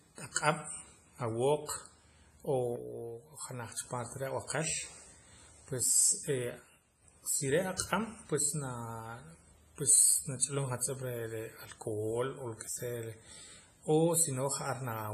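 From start to finish the speech carries heavy WMA compression damage, likely from a low-bitrate Windows Media Audio 1 encode, with a character that fits about 24 kbps. Long transform blocks smear quantisation noise over tens of milliseconds, so consonants ring and the background washes and breathes with the voice. On a spectrogram the top is cut flat with nothing above 15.2 kHz, and weaker regions show patchy, blocky gaps where lines were zeroed.

At 2.76 s the level drops abruptly by about 6 dB and stays down until 3.77 s, just before "cha parte". A second identical one channel drops out event runs from 6.60 s to 7.03 s. Both are likely a lost stereo channel: with the same sound on both sides, the mono sum halves while the timbre stays the same. The waveform shows a sharp step down to half amplitude and back, and the spectrogram dims uniformly with its shape unchanged.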